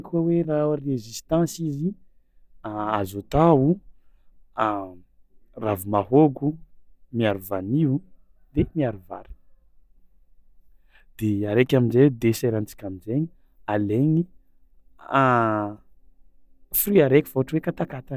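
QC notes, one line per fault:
No faults heard.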